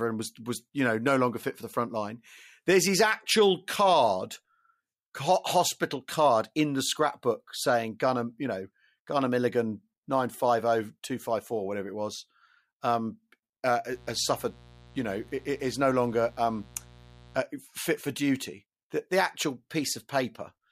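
Speech clip with mains buzz from 13.93 to 17.41 s, just after "was um uh uh": a raspy 60 Hz buzz roughly 25 dB under the speech. Switching spikes appear twice per cycle as a 120-per-second comb in the waveform, and as horizontal harmonic lines reaching several kHz in the spectrogram.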